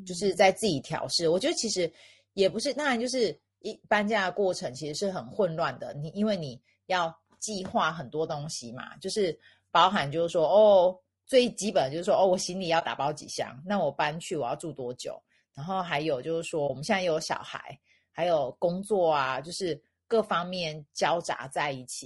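Throughout the speech, voices sound rough and grainy, with noise filling the gaps between harmonics and a thin, somewhat synthetic top band. This is plainly audible codec damage, likely from low-delay AAC compression (AAC-ELD) at a bitrate around 32 kbps, where short frames resolve pitch poorly.

At 12.79–12.83 s and again at 16.67–16.70 s, the sound briefly fades out and back in, leaving brief dips. This is AAC frame loss with muting. Each gap fits a single lost 20 ms frame whose spectrum the decoder zeroed, with overlapping windows smoothing the edges.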